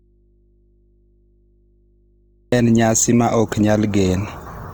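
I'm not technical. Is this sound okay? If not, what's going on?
No. For the first 2.52 seconds, the speech is almost missing. There is only a low mains hum until it suddenly returns. This is an audio dropout to a faint residue. The signal was likely lost upstream while the recording chain kept running.

Throughout the clip, the voice also sounds rough, grainy and noisy rather than clean. The likely cause is Opus compression squeezed too hard, so the encoder fills in detail it couldn't afford to keep with noise-like texture.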